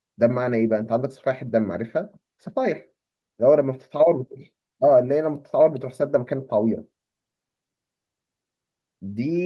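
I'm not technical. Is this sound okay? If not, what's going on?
Yes, there are no faults.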